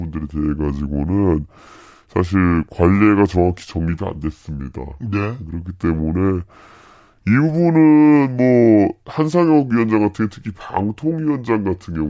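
A wrong sample rate affects this speech from start to finish. The voice sounds low and slow. It runs at about 0.73 times normal speed and sits about 5.5 semitones flat. That ratio fits 22 kHz audio played back at 16 kHz without conversion.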